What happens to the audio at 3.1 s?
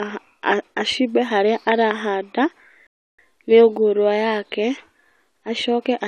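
At 3.1 s the speech is inside a rebuffering stall running from 2.87 to 3.19 s. The player exhausted its downloaded audio and paused until more data arrived, so the sound drops to silence for about 0.32 s and then resumes exactly where it stopped.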